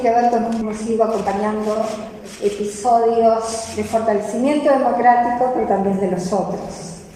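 At 0.61 s the audio skips ahead: about a second and a half of material was dropped, either lost in transit or discarded when the jitter buffer overflowed while later packets were already queued. Playback jumps straight across the gap with no fill, so the sound on either side is spliced almost directly together.

From 0.81 s to 3.66 s there is a jitter buffer speed-up. The buffer was holding more audio than its target, so the receiver repeatedly cut out short pitch-period-length segments, removing roughly a third of a second in total. The sound runs at about 109% speed with unchanged pitch and feels noticeably hurried.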